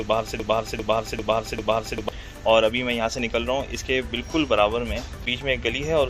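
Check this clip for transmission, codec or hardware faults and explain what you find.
One fault stands out. From 0.40 to 2.09 s, a broken-record loop repeats a 0.40 s fragment four times. A stalled player or stream likely resent its last buffer. The waveform shows identical blocks.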